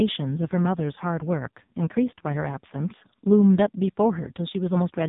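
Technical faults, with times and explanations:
Throughout: AMR narrowband mobile codec. Nothing passes above about 3.8 kHz, and the speech sounds heavily buzzy and synthetic. The coder rebuilds the voice from a vocal-tract model driven by sparse pulses, and damage this severe fits its very low 5.15 kbps mode.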